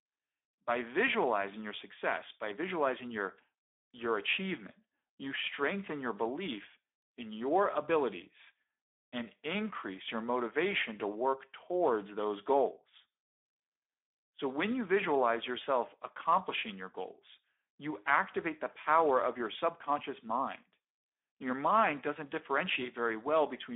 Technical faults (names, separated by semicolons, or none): Speex codec